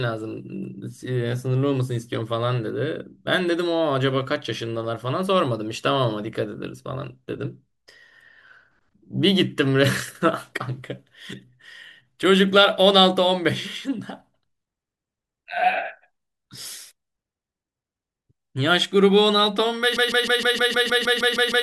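At 19.97 s the speech gets stuck in a broken-record loop that runs right to the end of the clip. A tiny slice, about 155 ms long, plays back to back about 11 times with no variation, so you hear a rapid, mechanical stutter instead of the rest of the speech. Whatever should have been said in those last seconds is gone. The likely cause is a stalled player, encoder or stream that kept resending the last fragment it had buffered.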